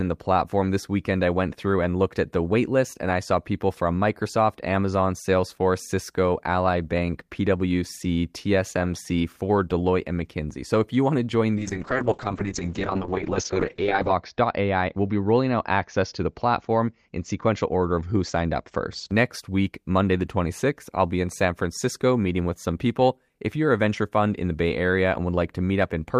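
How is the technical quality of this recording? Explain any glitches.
There's one real problem, a call bitrate drop from 11.57 to 19.15 s, starting right after "you want to join". The connection's bandwidth estimate fell, so the encoder had to work with far fewer bits. It coded the speech more coarsely and cut the top end from about 20 kHz down to 8 kHz. The speech turns muffled and a bit rough and watery. It's worst for about 2.6 s, which sounds like the rate bottomed out somewhere around 6 kbps, down from about 32, before it recovers.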